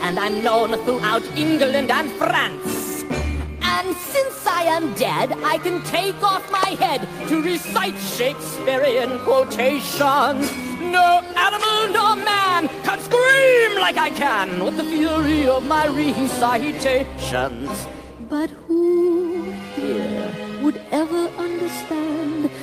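The signal holds steady throughout, with no dropouts, level jumps or disruptions to be heard at any point.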